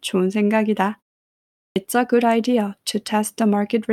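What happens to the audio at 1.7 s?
A clipped start after a pause: following roughly 0.78 s of silence, the sound resuming at 1.72 s loses its first 39 ms, up to 1.76 s. The output path apparently dozed during the gap and needed those milliseconds to wake and lock before passing audio again, so the sound bursts in abruptly with its opening sounds gone. Muted pauses would differ: they silence only the gap itself and return in time, so nothing after it is missing.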